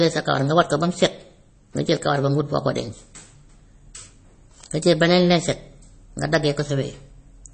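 The whole speech clip has that watery, swirly quality of MP3 compression, most likely from a low bitrate encode that fits about 32 kbps. Nothing comes through above 8.3 kHz, so s sounds go dull and chirpy, and weak detail flickers in and out.

There are two bit error spikes, each a single sharp click across the whole spectrum, unrelated to the speech. At 4.64 s a flipped bit jolts a short run of samples and snaps back. At 6.60 s, right after "jël beneen lañset nga", it sounds like just one sample.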